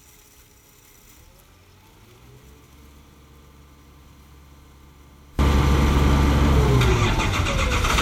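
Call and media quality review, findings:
Sound drops about 30 dB in mono from 0.0 to 5.39 s, only a faint residue left. Likely one channel inverted: reversed polarity cancels everything common to both sides on summing. Check the stereo routing or mixer channel polarity.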